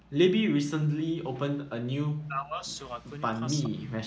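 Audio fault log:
2.19–2.67 s, speech suppressed in double talk: the speech sinks by roughly 40 dB for about half a second, likely because the echo canceller misjudged overlapping talk as echo.
3.63–3.70 s, echo leak: a faint, brief scrap of the speech returns about 414 ms late, around 20 dB down, likely because the loudspeaker side's echo canceller let loudspeaker pickup through.
3.72–4.03 s, speech suppressed in double talk: the speech again drops steeply, roughly 40 dB, for about 0.3 s, likely because both sides talked at once and the canceller turned down both its own talker and the echo.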